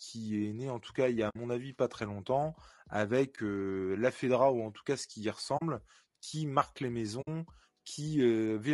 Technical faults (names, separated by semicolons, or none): low-delay AAC compression; AAC frame loss with muting